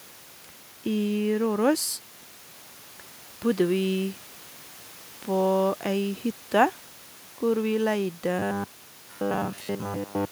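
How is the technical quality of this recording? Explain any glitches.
One clear glitch affects the final two seconds of this speech recording; room noise sits about 24 dB below the voice throughout.

Robotic sound from repeated short buffers runs from 8.39 s to the end at 10.31 s. The likely cause is audio arriving too late, so the same 10 ms slice is replayed for most of that stretch. This imposes a fixed 100 Hz buzz, turning the voice metallic and rigid.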